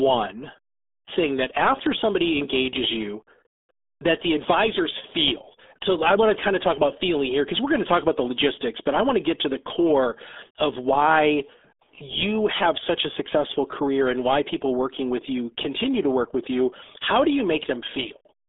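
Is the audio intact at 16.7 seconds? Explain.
No. At 16.7 seconds, as throughout, the speech is muffled and gargly, with nothing above 3.7 kHz: the RealAudio 14.4 codec's squeeze, which fits an 8 kbit/s stream, strips detail heavily.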